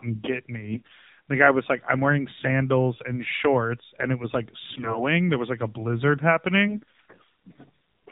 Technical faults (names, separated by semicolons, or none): AMR narrowband mobile codec; AMR bit errors